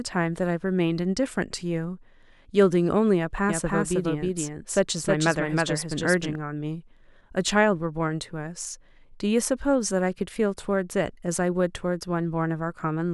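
From 3.49 to 6.35 s, the speech carries a doubled audio track. A second full-band copy trails by roughly 300 ms, at about equal level. It has no decay or room tone. It starts and stops abruptly, likely from a second, slower capture path.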